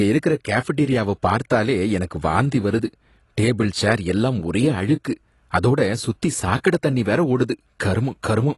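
From start to finish the speech sounds dull and smeared, with nothing above about 11.5 kHz and a fizzy, warbly edge on sibilants. That's likely AAC compression, a low-bitrate AAC-LC encode around 32 kbps dropping its cut-off and thinning the upper bands.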